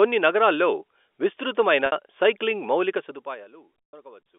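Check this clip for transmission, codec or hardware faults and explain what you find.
Two fault types stand out: packet loss concealed by pitch repetition, twice, and zipper noise during a level drop. The band-limited telephone sound of the G.711 line is heard throughout.

Packet loss with pitch repetition occurs at 1.86 to 1.92 s, just after "నగరాల్లో విస్తృతమైన" and before "సైక్లింగ్ మౌలిక", and again at 3.89 to 3.93 s. About 60 ms went missing the first time and about 120 ms the second, which fits two and four 30 ms packets. The receiver filled each gap by looping the last pitch period and fading it. The first sounds like a brief buzzy hold; the second, longer gap fades into silence before speech returns with a short cross-fade. On a spectrogram, flat, frozen harmonics appear. In the waveform, identical repeating cycles shrink in amplitude.

Zipper noise runs from 2.97 to 3.53 s, after "నగరాల్లో విస్తృతమైన సైక్లింగ్ మౌలిక". 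The level drops by roughly 20 dB in unsmoothed 4 dB jumps, about ten each second. Each jump makes a small click, so the fade sounds like ticking. The waveform envelope descends as a staircase. The spectrogram shows faint broadband vertical lines at each step.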